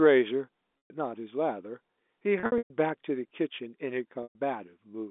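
At 0.81 to 0.90 s, 2.40 to 2.70 s and 4.23 to 4.35 s the speech briefly freezes into a held, buzzy tone that fades before resuming. This is packet loss with pitch repetition: the receiver loops the last pitch period to cover about 120 ms of missing audio at each end, and 210 ms scattered through the middle gap.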